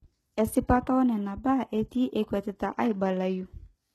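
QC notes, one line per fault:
throughout: HE-AAC compression. The encoder likely coded only the lower spectrum and rebuilt the treble by copying lower bands upward, so the synthetic top's harmonics don't line up with the speech below, nothing sits above 12.3 kHz, and the plainly audible damage fits a bitrate near 16 kbps.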